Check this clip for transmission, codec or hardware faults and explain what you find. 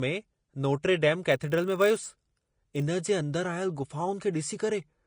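Two faults are audible in this speech clip: a codec signature running the whole way through, and a block-rate buzz in the middle.

Throughout, the treble is hissy and grainy, and consonant attacks are smeared. This is likely Vorbis compression at a low rate, around 34 kbps: coarsely quantised high bands turn into noise-like grain. Unlike a plain low-pass, the remaining treble itself sounds rough.

From 1.3 to 2.85 s, a filter restarted on every block produces a 50 Hz buzz. Each block starts from silence with a small transient. Unlike mains hum, the buzz rises and falls with the speech level and stops with it.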